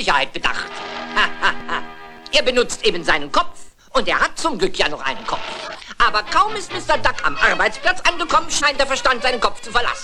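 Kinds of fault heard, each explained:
Corrupt frame decoded: brief glitches near 5.6 s and 8.5 s, the second louder, from bit-damaged compressed frames the decoder played anyway.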